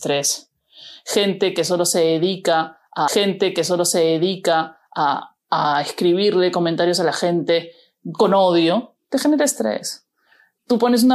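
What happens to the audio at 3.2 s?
At 3.2 s the speech falls inside a stream segment repeated, running from 3.07 to 5.06 s. Just after "que solo se dedica", the player jumps back and plays about 2.0 s of material a second time, with a small blip at the seam, because the same segment was fetched or queued twice. Unlike a dropout or a short stutter loop, nothing is lost and the repeat is a whole, coherent stretch, adding about 2 s to the clip.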